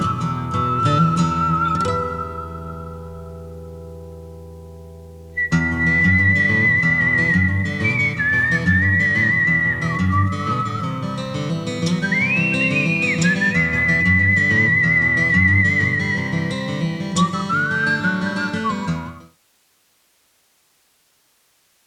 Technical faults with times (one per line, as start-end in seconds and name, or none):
none